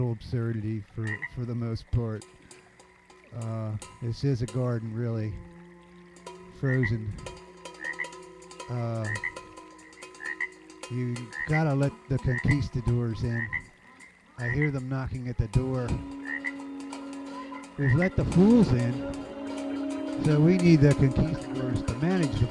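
No faults to report; nothing in the audio points to a failure anywhere along the chain.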